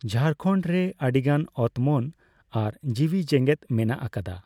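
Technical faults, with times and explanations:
No technical faults found in the speech recording.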